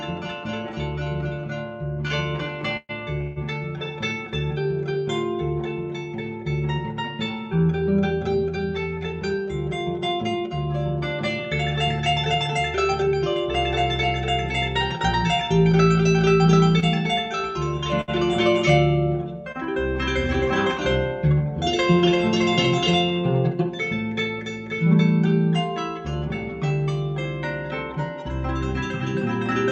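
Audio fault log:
2.07–3.38 s, repeated stalls (stutter): Late packets emptied the jitter buffer three times. The last sound was held for 301 ms in total, longest 152 ms. Nothing is lost, but the audio drags.
8.97–13.15 s, jitter buffer speed-up: The buffer held too much audio, so tiny pitch-period pieces were cut, roughly 150 ms in total. Playback runs at 104% with pitch unchanged.
16.80–16.84 s, 18.01–18.10 s, 19.52–19.56 s, short stall from a late packet: Each late packet briefly emptied the buffer. The sound is stretched by 23, 67 and 27 ms, then resumes where it left off.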